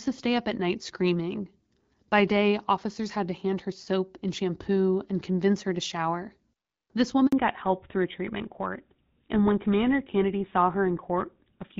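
At 7.27 s the call is passed from one network to another, and during the switch no speech frames get through. This handover gap runs for 60 ms, to 7.33 s. The voice dies away within a few tens of milliseconds, leaving a short hole of silence before the new link starts carrying audio again. Whatever was said in that instant is missing rather than smeared or repeated.

From 7.33 s to the end, the call falls back to narrowband. The audio is re-coded with an older narrowband codec, whose gritty character suggests GSM full rate at 13 kbit/s. Before the switch the speech has the fuller, lightly coded sound of HD Voice, consistent with AMR-WB at 12.65 kbit/s. After it, nothing above 4 kHz remains. The speech turns duller and more muffled, with a rougher, telephone-like texture.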